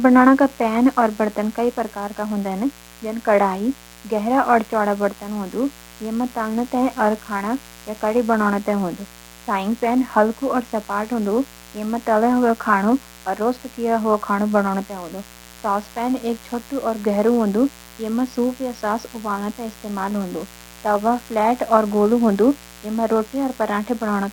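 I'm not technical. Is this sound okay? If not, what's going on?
No. There is mains buzz under the speech for the whole clip. It is a steady, raspy hum from the 60 Hz electrical supply. Something like a dimmer or poor shielding lets electrical spikes leak in. It sits well below the speech.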